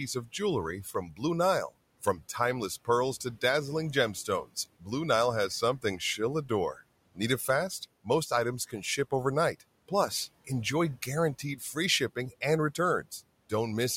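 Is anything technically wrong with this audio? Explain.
Yes. Between 0.84 and 1.21 s, just after "of jewelry", there is speech cut by the noise suppressor: it mistook soft speech for background and pulled it down by about 12 dB, leaving roughly 150 ms swallowed and faint. Unlike a dropout, the sound dips rather than vanishing, and the room noise, about 23 dB below the speech, sinks with it.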